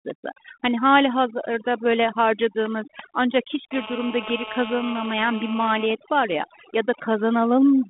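A speech recording over a telephone-band line, its sound stopping below about 3.8 kHz in a way that fits 32 kbit/s G.726 ADPCM, shows overdone noise removal throughout: aggressive noise reduction switches off frequency bands near its noise estimate, leaving near-silent backgrounds with twinkling specks. From 3.73 to 5.86 s, between "hazırda böyle harcadığımız ancak" and "var ya ya", a nearby 2G phone on a call causes GSM phone buzz: its 217 Hz transmit bursts, rectified in the audio circuit, produce a steady, raspy buzz rich in harmonics, about 12 dB below the speech.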